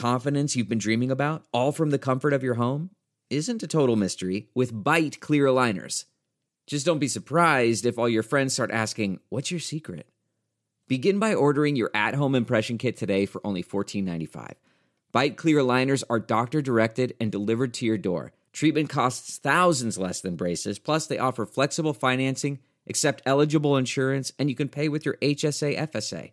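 No technical faults can be heard anywhere in the speech, so there is nothing to place in time or trace to a cause.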